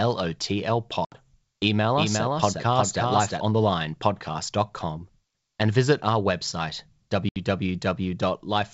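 At 1.05 to 1.19 s, packet loss on an ADPCM call cuts a 70 ms hard-edged silence, which fits about seven lost packets. Unlike a plain dropout, the speech returns slightly distorted while the decoder's predictor resyncs. From 1.97 to 3.41 s a doubled audio track runs underneath, likely a second capture path. The full-band copy is about 5 dB quieter and trails by roughly 0.4 s, with no decay or room colour, unlike an echo, and it starts and stops abruptly. The same packet loss recurs at 7.29 to 7.43 s, just after "and visit our website", over clear G.722 wideband sound.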